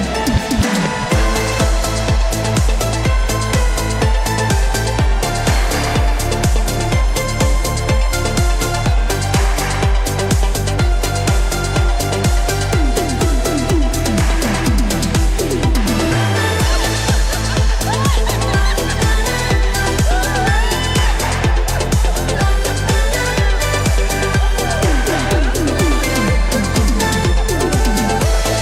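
Nothing is technically wrong with this clip.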